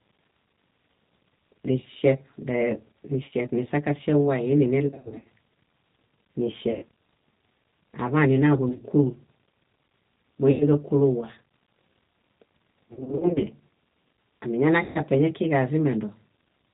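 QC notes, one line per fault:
throughout: G.729 codec. Speech is band-limited below 4 kHz and sounds rough and synthetic, a steady coarseness that fits an 8 kbit/s G.729A stream.
3.24–3.33, 4.88–5.25, 6.72–6.84, 8.69–8.81, 10.51–10.65, 12.89–13.47, 14.84–15.00 s: VoIP packet loss concealed by the speech codec. Gaps are filled with stretched, fading extrapolation, with speech staying weak briefly after recovery. This distinguishes them from hard dropouts.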